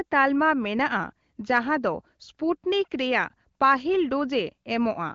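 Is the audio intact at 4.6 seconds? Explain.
Yes, the audio is intact at 4.6 seconds, with no fault at that moment beyond the light coding and the absence of anything above 7 kHz that come with the AMR wideband (HD Voice) path at 15.85 kbit/s.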